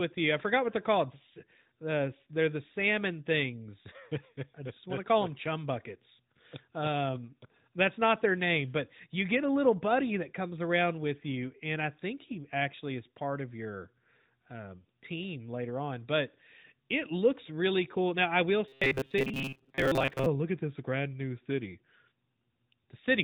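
From 18.68 to 20.26 s, between "I will" and "look at this grand", robotic sound from repeated short buffers turns the speech into a rigid 134 Hz metallic buzz. The likely cause is late audio, so a roughly 7.5 ms segment loops over most of that stretch.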